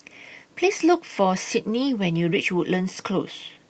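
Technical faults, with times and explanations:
Throughout: clock drift between sender and receiver. The far end's audio clock is running a few percent slow compared with ours, so the jitter buffer keeps draining and the receiver has to pad things out to avoid running dry. You hear it as small timing hiccups that never settle, at uneven intervals, laid over speech that's already band-limited to about 8 kHz by the Opus call path.
0.12 to 3.55 s: repeated timing corrections. To stay in step with that slow sender, the receiver keeps repeating short slivers of audio, always stretching, never cutting, with uneven spacing between edits. Overall the speech plays at about 97% speed and picks up around a tenth of a second of extra length across the stretch. Each repeat is tiny, so it comes across as a faintly unsteady, slightly dragging tempo with occasional small stutters rather than obvious glitches.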